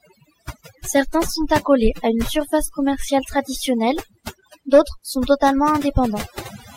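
Overdone noise removal runs the whole way through: the reduction was set too hard, so the background drops and breaks up into twinkly specks and quiet parts of the speech are cut away with it.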